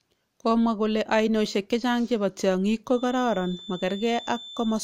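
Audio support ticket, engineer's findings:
Feedback whistle, 2.84 s to end, after "ainosiek chechang chebo tiang'ik". Thin steady 3.5 kHz tone, well below speech level, swelling and fading slowly in level. Likely speaker-to-mic acoustic loop held at the edge of feedback, one frequency ringing without running away.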